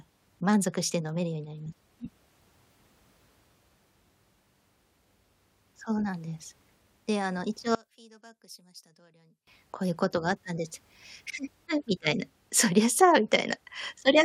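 A speech recording with one fault. From 7.75 to 9.47 s the sound collapses to a faint remnant, dropping by about 28 dB. Then it returns to full level. The likely cause is one channel inverted. One stereo side has flipped polarity. When the two sides are summed to mono, the centred speech cancels against itself. Only the small difference between the channels survives, heard as a weak trace.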